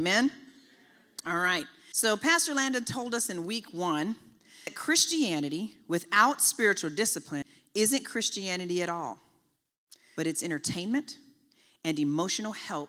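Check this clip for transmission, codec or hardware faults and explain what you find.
One fault recurs through the speech: audio missing between chunks. It occurs at 1.92, 4.67, 7.42 and 10.17 s. Each is an abrupt skip of about a third of a second. It likely comes from 3-second chunk boundaries, where audio is lost during the handover and the two sides are butted together.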